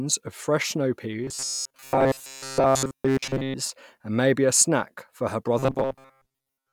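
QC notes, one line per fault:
1.24–3.54 s and 5.59–6.72 s, robotic sound from repeated short buffers: the speech collapses into a rigid, metallic buzz pinned at 134 Hz that still loosely tracks the words, with most of the audio in each span replaced rather than heard. The likely cause is audio arriving too seldom, so each gap is filled by looping a fragment of about 7.5 ms. Unlike plain dropouts or stutter, the steady fixed pitch separates it.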